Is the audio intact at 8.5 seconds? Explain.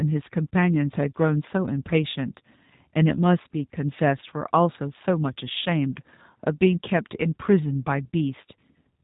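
No. At 8.5 seconds, as across the whole clip, the G.729 codec has plainly audible damage. The speech is rebuilt from a vocal-tract filter, a pitch predictor and a few pulses per 10 ms frame rather than the original waveform, at a rate that fits 8 kbit/s. Nothing above 3.8 kHz survives, so the sound is dull and band-limited, with a rough, slightly synthetic quality.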